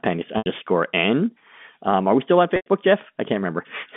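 At 0.38 s and again at 2.56 s, the speech briefly locks into a buzzy, held tone that thins away to silence before the voice returns through a short cross-fade. This is packet loss with pitch repetition. About 80 ms was lost in the first gap, which fits four 20 ms packets, and 100 ms in the second. The receiver filled each gap by looping the last pitch period and fading it out. Both gaps are audible against the narrow telephone band of the G.711 line.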